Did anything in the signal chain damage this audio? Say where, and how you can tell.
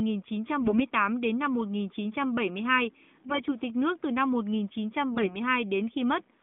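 Yes. AMR bit errors on the radio link hit the speech at 0.60–0.81 s (before "đến năm"), 3.28–3.51 s (before "tịch nước từ năm") and 5.12–5.37 s. Each burst of roughly ten 20 ms frames keeps pitch and level but turns hoarse and gargly. These are corrupted codec parameters, not lost packets, which would leave gaps or smeared repeats.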